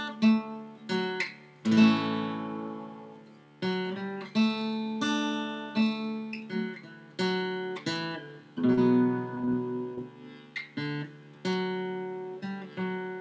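Short concealed packet loss hits at 8.74–8.79 s, 9.35–9.42 s, 9.45–9.49 s and 9.95–9.99 s: packets arrived too late, so the receiver extended the preceding sound and blended back, each gap of 20–40 ms heard as a brief smear or wobble within audio band-limited to 8 kHz.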